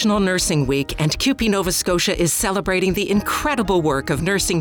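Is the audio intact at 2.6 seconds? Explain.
No. At 2.6 s, as throughout, a block size mismatch (truncated) discards each 1024-sample block's tail, causing a 43.1 Hz buzz with speed unchanged (1.0x). Spectrograms show vertical striping at that rate; waveforms show regular discontinuities.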